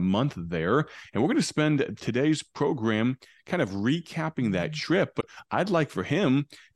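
Damaged data in the compressed speech stream at 5.17 to 5.24 s breaks decoder sync while it hunts for the next frame, producing a brief chirp, squawk, click or short hole.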